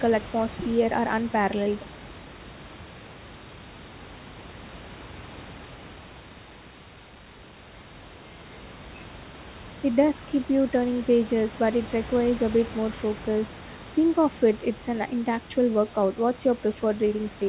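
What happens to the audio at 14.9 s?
Nothing goes wrong at 14.9 s; the speech carries on intact through that moment.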